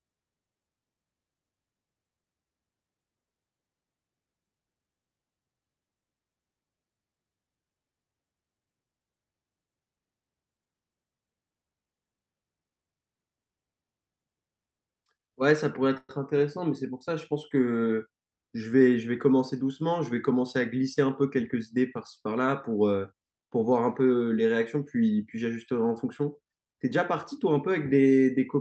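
A call audio freeze runs from 15.97 to 16.11 s. The last sound is stretched into a fading buzz that ends in about 40 ms of silence, likely because packets stalled and the jitter buffer ran dry. The speech then resumes intact, about 114 ms later than before.

A jitter buffer speed-up follows from 18.02 to 18.96 s. The receiver trims a string of pitch-period slices, about a tenth of a second in total, to shed the extra delay. The speech runs at about 110% speed at unchanged pitch and sounds briefly hurried.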